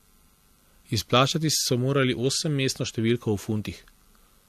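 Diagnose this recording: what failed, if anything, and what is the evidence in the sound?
Codec stage, throughout the speech: nothing is present above 14 kHz, and two distinct sets of compression artefacts are heard together. The likely cause is transcoding between lossy codecs, fitting an MP3 encode re-encoded to AAC-LC. The second coder spends bits on the first one's artefacts.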